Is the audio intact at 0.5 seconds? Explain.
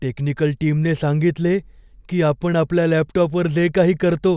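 Yes, the speech at 0.5 seconds is intact, with no fault audible at that moment.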